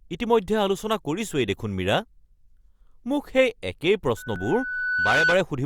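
At 4.17 s a loudspeaker feedback squeal begins: a microphone is picking up the loudspeaker it feeds, and around 1.5 kHz the loop gain has passed one, so that frequency keeps reinforcing itself. Over the speech a single pure tone rises for about a second until it sits roughly 5 dB above the talker, a piercing whistle that then cuts off at 5.43 s.

Inside the squeal, at 4.36 s, there is an overlap between stream segments. Two consecutive chunks of the stream claim the same stretch of time, and the player discards the doubled part even though that audio was never actually repeated. About 16 ms of sound disappears, so the waveform jumps across the gap and the speech gives a small click or skip. The spacing fits segments two seconds long.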